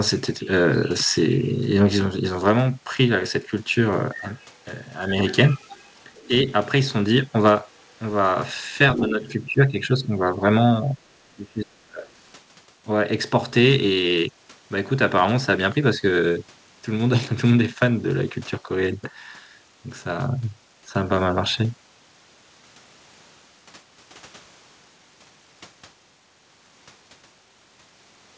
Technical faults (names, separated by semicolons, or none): other side's voice leaking through; speech suppressed in double talk